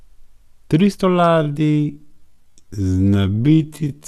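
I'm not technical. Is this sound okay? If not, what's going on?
No. From about 1.08 s to the end, the speech is a time-stretched section. It suddenly runs at half speed with unchanged pitch, so it drags. Software likely lengthened it by repeating tiny pieces of sound.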